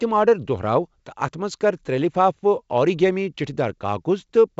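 No technical faults can be heard anywhere in the speech. It comes through G.722 wideband telephone coding at 64 kbit/s, which carries the sound up to a ceiling of about 7.7 kHz and leaves at most a faint trace of its coding.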